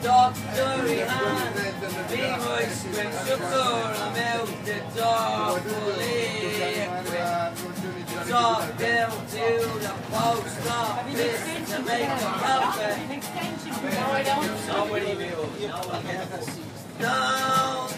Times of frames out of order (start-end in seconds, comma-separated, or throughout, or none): 3.14-3.54